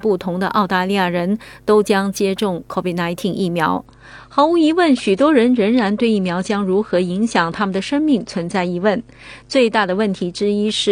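At 3.86 s the quality drops suddenly with no gap. An adaptive stream switching to a lower bitrate would sound like this, and it stays lower to the end. The treble above about 9.8 kHz vanishes and codec artefacts thicken, which fits a step from roughly 96 to 32 kbit/s.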